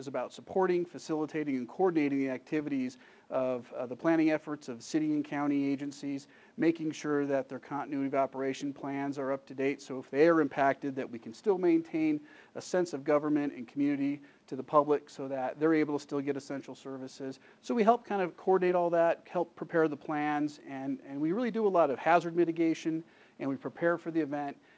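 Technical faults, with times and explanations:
No technical faults detected.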